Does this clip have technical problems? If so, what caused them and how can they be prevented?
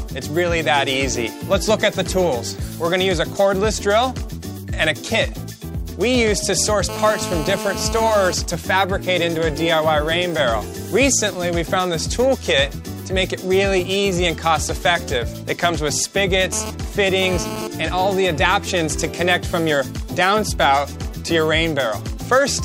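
Yes. A hard, raspy buzz at about 217 Hz, rich in harmonics and about 8 dB below the signal, is GSM phone buzz. It is steady from 6.89 to 8.34 s and stutters from 16.52 to 17.67 s as a nearby 2G phone's transmission bursts are rectified by the audio circuitry. Keeping phones away from cables and equipment prevents it.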